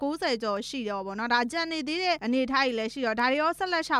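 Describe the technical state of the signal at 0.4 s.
At 0.4 s you're inside a run of word clock ticks that stretches from about 0.17 s to 3.2 s. The receiving device is running on its own clock, drifting against the sender's by something in the region of 15 ppm. Each time the two clocks slip past each other, a single sample gets dropped or doubled. You hear that as a sharp tick roughly every second and a half, about three of them across that span.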